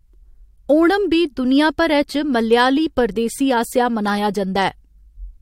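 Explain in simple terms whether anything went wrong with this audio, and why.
Listening to the speech here, nothing stood out as having gone wrong.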